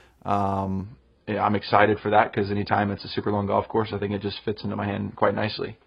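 At 0.84 s the speech abruptly drops to a lower-bitrate adaptive stream: codec artefacts rise and nothing remains above 5 kHz. There is no gap, which separates it from a dropout.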